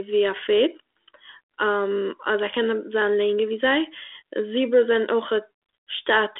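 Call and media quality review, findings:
No findings for call and media quality review: G.726 ADPCM at 32 kbit/s with the usual 300 Hz to 3.6 kHz telephone band, nothing above 3.9 kHz, and only light codec texture.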